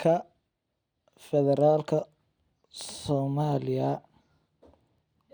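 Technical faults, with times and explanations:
No technical faults can be heard in this speech clip. Nothing in it calls for a time or an explanation.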